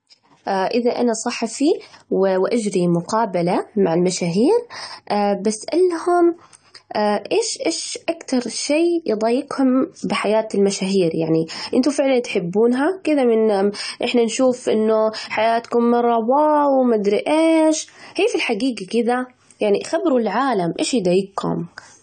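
Throughout the speech the top end stops dead at about 9 kHz, the tone is dull, and sibilants carry a fizzy, warbling texture. This is likely AAC compression, consistent with AAC-LC at roughly 32 kbps, where coarse quantisation strips high bands and smears detail.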